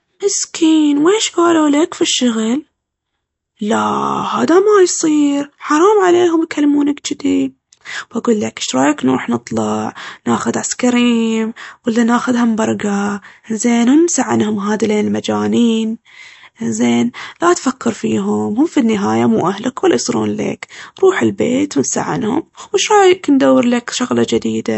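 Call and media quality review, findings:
MP3 compression, whole speech clip, plainly audible. Hard treble ceiling at 8 kHz, nothing above. Watery, swirling texture as weak frequency lines drop in and out frame to frame. Likely a low-bitrate MP3 encode, consistent with roughly 48 kbps. Distinct from a plain low-pass or narrowband path: the cutoff alone would sound dull but stable, with no frame-to-frame swirl.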